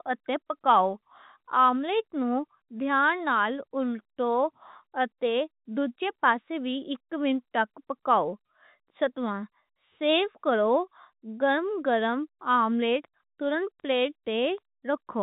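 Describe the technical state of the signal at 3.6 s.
At 3.6 s the speech is intact, carried through G.711 telephone coding that passes nothing above about 3.8 kHz.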